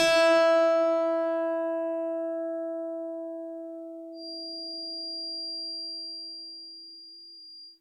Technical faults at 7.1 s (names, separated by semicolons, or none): feedback whistle